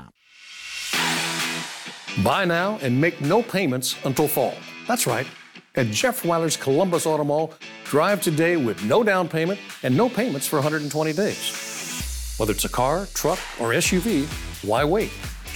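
No technical faults are audible anywhere in the audio.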